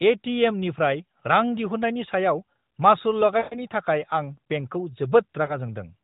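Lost AMR speech frames, where corrupted frames failed their checks and the decoder patched over them with fading guesses, cut into this narrowband mobile speech twice. From 3.38 to 3.60 s a run of about seven frames stretches the sound, then fades it toward silence before it returns weak. At 5.46 to 5.57 s a single lost frame leaves a brief dip. The AMR narrowband mobile codec's light damage fits its 12.2 kbps mode.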